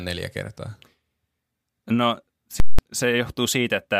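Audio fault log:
0.68 s, dropped samples: There's a single sharp click here, like a thin vertical line through the spectrum. What's likely happened is that a tiny stretch of the stream, a fraction of a millisecond at most, went missing, so the waveform jumps straight from one value to a later one. That step is far too brief to take any speech away, but an instant discontinuity like that sprays energy across all frequencies, which is why you hear it as a click.
2.6 to 2.79 s, invalid numbers at full scale: You get a very loud pop at about 2.6 s, then nothing for roughly 0.19 s, then another pop at about 2.79 s. A calculation produced infinite or invalid values, and they got pinned to the largest value the format allows, so the output just sits flat at one extreme value, far beyond the speech peaks, for the whole block. The length fits an 8192-sample processing block. The pops are the sudden jumps up to and back down from that rail. 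The flat stretch between them is silent because a constant signal has no movement to hear, so the speech there is wiped out.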